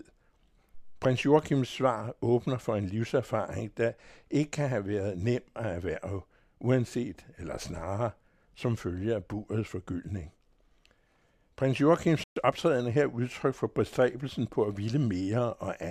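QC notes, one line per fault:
12.24–12.36 s, playback stall: the speech cuts out mid-flow for about 127 ms, a silent gap before the sound resumes. This is likely the player running dry of buffered data, or its output thread being blocked, so nothing reaches the output until it recovers.
12.36–12.60 s, time-compressed catch-up: just after the gap, leading into "er her udtryk for", the speech runs hurried at 1.5× speed but keeps its normal pitch. Small slices are being dropped and cross-faded to clear the backlog left by the stall.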